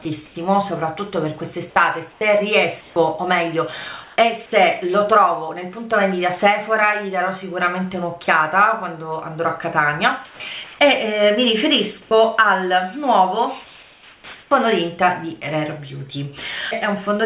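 Comfort noise in place of the background appears at 0.26–0.35, 2.12–2.21, 2.81–2.96, 4.04–4.16, 10.25–10.79 and 13.64–14.51 s. Each time, the quiet background turns into a flat, featureless hiss; in most of these gaps that background sits about 30 dB below the loud parts, and in some gaps the hiss is about 2 to 3 dB quieter. This is likely discontinuous transmission, with the receiver synthesising noise while the sender paused.

At 12.02–12.11 s, sound dropped by the voice detector: about 40 ms of real sound gives way to steady noise, likely because the detector mistook it for background.

Onset clipped by the voice detector at 14.48–14.51 s: the sound after the long gap starts abruptly, its first 30 ms missing, likely because the detector reacted late. The band stops at 4 kHz throughout, which fits a G.711 call codec.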